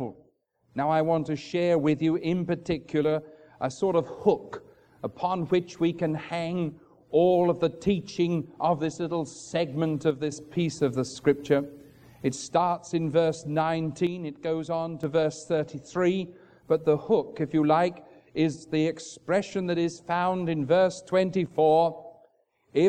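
One channel drops out at 10.11 to 10.32 s, again at 14.07 to 15.03 s, and briefly at 21.46 to 21.51 s. Each time the level falls abruptly by about 6 dB and then snaps back, the longest dip lasting nearly a second. The likely cause is one stereo channel going silent before the mono sum, so material shared by both sides halves in amplitude and anything present only in the lost side vanishes.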